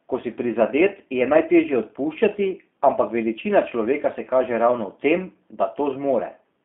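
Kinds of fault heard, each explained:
G.729 codec: The speech has passed through a low-rate VoIP codec, and the variant heard is likely G.729A. It sounds slightly rough and synthetic throughout, since a filter and pulse model rebuilds each frame. The band stops near 3.5 kHz, leaving it thin and muffled.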